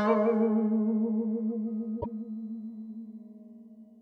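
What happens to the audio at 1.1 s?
Nothing goes wrong at 1.1 s; the music plays through that moment intact, with no dropout, click or distortion.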